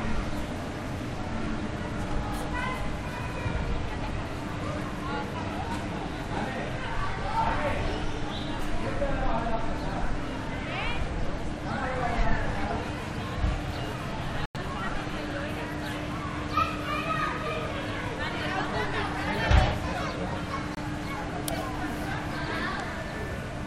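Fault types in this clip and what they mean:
Corrupt frame muted: the decoder rejected damaged compressed frames and silence replaced them, so the sound stops abruptly at 14.46 s for 0.11 s and at 20.75 s for 0.06 s. Unlike a skip, the timing stays intact around each gap.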